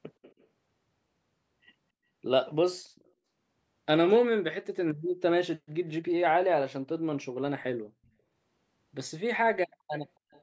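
Faint delayed copies of the speech trail the talker at 0.22–0.47 s, 2.96–3.11 s, 8.05–8.09 s, 9.93–10.08 s and 10.31–10.42 s, each arriving 274 ms late. This echo leak likely comes from a far-end loudspeaker whose echo canceller let residue through. The echoes sit roughly 20 to 40 dB under the speech, loudest near 9.9 s. On a spectrogram they show as weak, shifted repeats of the preceding harmonic bands, all cut off at 8 kHz. On the waveform they appear as small trailing bumps.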